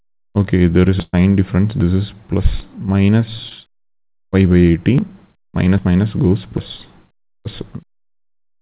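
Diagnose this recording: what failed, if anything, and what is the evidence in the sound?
Network stage: a burst of packet loss from 1.02 to 1.15 s. About 100 ms never arrived, so the receiver stretched the last sound into a decaying continuation, then roughly 30 ms of silence, and playback resumes further on. Unlike a dropout, content is skipped rather than paused.

Network stage again: a short concealed packet loss at 3.49 to 3.52 s. About 20 ms went missing and was covered by a brief extrapolated fill blended back into the real audio. It is heard as a quick smear, not a hold or silence, through the G.711 path's 4 kHz-limited band.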